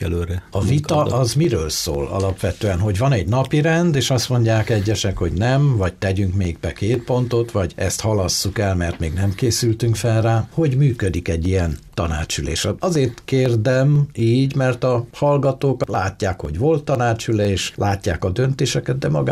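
Regular tiny ticks run through the sound from 0.44 s to 18.94 s, one every 0.50 s, about forty in all. These are periodic USB or driver dropouts: at each tick something briefly stalls the audio path and roughly half a millisecond of signal is skipped, not replaced with silence.

Between 11.06 s and 11.14 s a short burbling patch appears, and a shorter one follows at 16.09 to 16.13 s. This is DAB burbling: weak reception let bit errors, around 0.15 and 0.07 percent, past error correction, putting short blips of noise into individual sub-bands.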